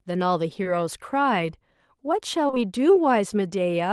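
At 0.63 to 0.67 s, then 2.47 to 2.58 s, short concealed packet loss: 20 ms stretches went missing and were patched by extending the preceding sound, heard as brief smears rather than silent gaps.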